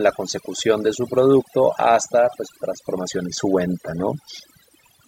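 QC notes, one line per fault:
Throughout, overdone noise removal: the noise reduction was pushed too hard on this speech, so the background drops and breaks up into twinkly specks, and quieter parts of the voice are cut away with it.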